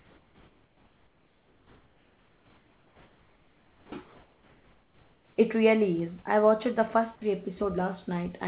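From the start to 3.92 s, and again from 4.04 to 5.36 s, the background turns into a smooth, even hiss with none of the texture of a real room, sitting about 38 dB below the loudest speech and about 3 dB quieter than the background it replaces. This is comfort noise in place of the background. The sender likely stopped transmitting while its voice detector heard no speech, and the receiver filled the pauses with synthetic noise roughly matched to the background's spectrum and level.

At 3.90 to 3.92 s the speech bursts in abruptly, its soft beginning missing for about 20 ms. This is an onset clipped by the voice detector. The detector was likely slow to register that speech had resumed, so the first fragment was never sent and the receiver kept playing comfort noise until real audio arrived.

Right after "I watched the first", from 7.15 to 7.21 s, the speech briefly gives way to steady noise for about 60 ms, with about 30 ms of actual speech lost before it returns. 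This is sound dropped by the voice detector. The detector likely mistook a quiet stretch of speech for background and halted transmission, and comfort noise filled the gap until it triggered again. Throughout the clip, nothing reaches above 4 kHz, which fits a narrowband G.711 call codec.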